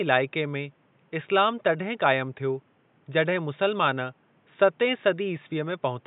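No technical faults can be heard anywhere in the speech. The only background sound is the room's own noise, sitting about 39 dB below the voice and belonging to the recording itself.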